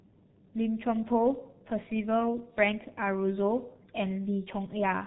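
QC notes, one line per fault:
Throughout: G.723.1 codec, heavy damage. Nothing above 4 kHz survives, and the slowly updated voice model leaves the speech muffled and hoarse, with smeared consonants. The coarse, grainy roughness fits a rate near 6 kbit/s, which a plain low-pass filter would not add.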